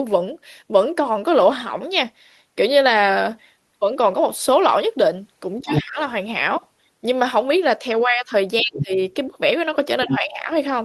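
At 5.59 s a second voice, about as loud as the talker, breaks in for a quarter of a second, until 5.84 s. This is the other side's voice leaking through: the far end was likely playing from a loudspeaker and reaching the microphone, and the echo canceller failed to remove it. The same intrusion returns, a little quieter than the talker, from 8.74 to 8.83 s and from 10.01 to 10.17 s, each time as a brief scrap rather than a sustained stretch.

Each of these leaks comes with the talker's own speech sinking. From 5.63 to 5.98 s the voice drops by roughly 15 dB. From 8.61 to 8.98 s it drops deepest, by about 20 dB. From 10.05 to 10.5 s it dips by around 10 dB. This is speech suppressed in double talk: with both sides talking together, the canceller likely could not separate the talker from the echo and turned both down. The dips last about a third of a second in the first two spots and closer to half a second in the last.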